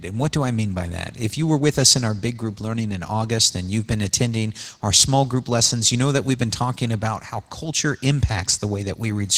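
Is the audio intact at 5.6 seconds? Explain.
Yes, at 5.6 seconds the speech comes through intact, with no dropout, click, distortion or other fault at that moment.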